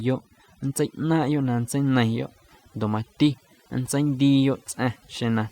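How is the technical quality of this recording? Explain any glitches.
The recording suffers from one problem that runs through the whole speech clip: overdone noise removal. Throughout, a noise reduction stage has been pushed too hard, cutting individual frequency bands far down or out whenever their level sits close to what it judges to be noise. Quieter parts of the voice fall below that line and vanish along with the noise, so the pauses collapse into near silence dotted with twinkling specks.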